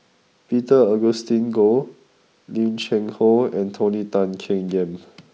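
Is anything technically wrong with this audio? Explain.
No, nothing technically wrong is audible in this speech recording.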